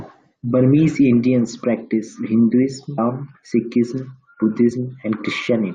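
Damaged data in a compressed stream corrupts two short stretches of this speech, at about 2.97 s and 4.70 s. Each time the decoder misreads the bad frames and loses sync until it finds the next valid frame header, producing a brief glitch of under 20 ms.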